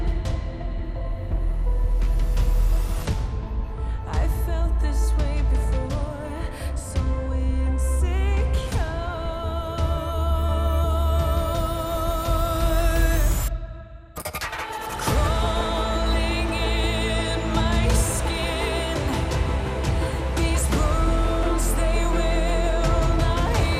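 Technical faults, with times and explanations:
Throughout, MP2 compression: dull, gurgling, granular sound that fits about 80 kbps, likely from MPEG Layer II starving sub-bands of bits. Spectrogram shows upper bands flickering on and off in blocks.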